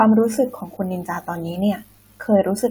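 Nothing in the recording stood out as a technical problem when I listened.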